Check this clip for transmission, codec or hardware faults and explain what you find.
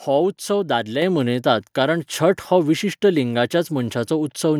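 One fault shows up, a microphone volume stepped up at 1.02 s. The call software raised the input gain by about 6 dB in one step, so speech and background jump together; the waveform envelope and spectrogram brightness step up abruptly.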